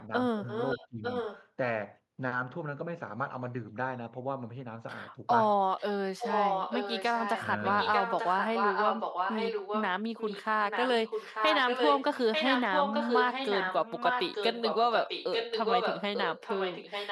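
Speech with two faults. Speech suppressed in double talk appears at 0.32–0.47 s and 0.78–1.02 s: the voice sinks by roughly 25 dB in short bites. It is a loss of the talker's own sound rather than anything added, likely an echo canceller ducking both sides during overlap. Echo leak brings a delayed repeat of the voice 0.89 s behind it at 0.49–1.49, 5.78–5.83, 6.18–7.45, 7.63–9.86, 10.18–10.45 s and from 10.7 s to the end. It is often as loud as the speech itself and faint only at 5.78 s. Its fixed lag marks it as loudspeaker pickup likely missed by the far end's canceller, not suppression.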